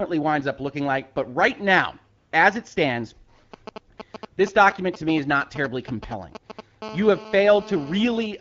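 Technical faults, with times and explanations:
2.17–2.31 s, 3.93–3.97 s and 4.31–4.37 s, AMR comfort noise: In the first gap, between "right now" and "as it stands", the phone decided nobody was talking and stopped sending speech for about 140 ms. The far end plugged the hole with synthetic noise built from a rough sketch of the background's level and spectrum. You hear the real room drop out and a smooth, even hiss switch in, then snap back. The two later dropouts are shorter, about 40 and 60 ms.
3.54–6.84 s, GSM signalling bursts: Right after "now as it stands", a nearby 2G phone starts signalling, sending short groups of radio bursts. The audio circuitry rectifies them into a galloping dit-dit-dit of brief buzzes at about 217 Hz. This interference sits fairly high, roughly 10 dB under the speech.
6.84–8.26 s, GSM phone buzz: That phone then goes into a full call and transmits in bursts about 217 times a second. 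Rectified, this becomes a steady, raspy 217 Hz buzz packed with harmonics, with no connection to the speech underneath. It's about 17 dB below the talker, quieter than the signalling gallop before it but constant, and it runs to near the end of the clip.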